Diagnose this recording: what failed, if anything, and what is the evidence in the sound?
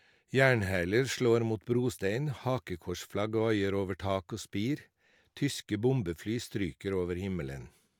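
Nothing in this speech recording points to a failure at any stage of the chain. No event in the sound calls for a diagnosis.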